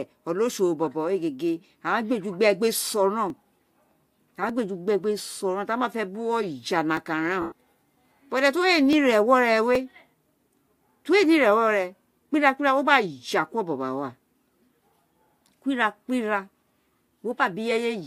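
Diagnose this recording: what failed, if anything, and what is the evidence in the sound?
A short, rough, noisy burst in the speech at 2.91 s lasts about 15 ms. At 7.41 to 7.52 s, a 105 ms stretch turns into a grainy smear that fades toward silence instead of stopping abruptly. These are lost LE Audio frames on the Bluetooth link. The LC3 decoder hides each missing frame by reusing the last spectrum with scrambled signs and attenuating it once the loss runs past a few frames. The durations fit two and fourteen 7.5 ms frames, matching the LC3 framing in use.

Five isolated single clicks occur at 3.30, 4.49, 6.97, 8.93 and 9.75 s. Each shows as a thin vertical line across the spectrum, and no audible portion of the speech is missing around them. These are dropped samples, well under a millisecond each, so the waveform jumps straight from one value to a later one. The likely cause is the driver or buffer stage occasionally discarding a handful of samples during transfer.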